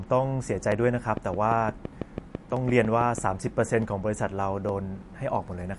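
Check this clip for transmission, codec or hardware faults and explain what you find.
Three kinds of fault are audible in this speech clip.

MP3 compression runs throughout: nothing reaches above 11.3 kHz, and a watery, swirling quality points likely to a low bitrate around 48 kbps, unlike clicks.

Dropped samples at 0.72, 2.57, 3.82 and 4.69 s each give one isolated sharp click, a fraction of a millisecond lost; likely a stream glitch, not a repeating train.

A train of clicks from 1.17 to 3.19 s ticks regularly, about six per second, some fifteen pulses up to about 10 dB above the sound, likely from interference.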